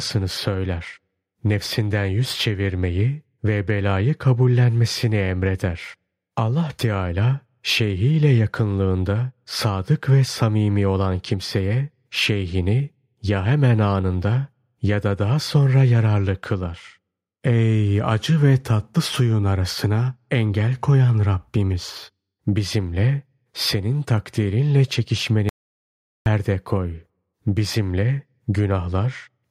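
An audio dropout to silence runs from 25.49 s to 26.26 s, cutting the speech off mid-flow for about 0.77 s before it resumes just as abruptly. The gap is silent with no room tone beneath it, the mark of a recorder writing silence while its input was absent. The likely cause is a brief loss of the input signal, such as a momentary disconnect, a failed link or an accidental mute. Whatever was spoken in that stretch is gone.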